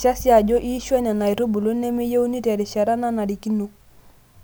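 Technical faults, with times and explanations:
No technical faults can be heard in the speech signal, which keeps unbroken continuity throughout.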